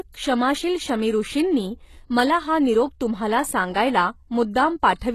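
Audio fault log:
Throughout: likely HE-AAC compression at a rate that fits about 16 kbps; the treble is rebuilt from copied lower bands and stops at 12.3 kHz, so sibilants sound gritty and metallic.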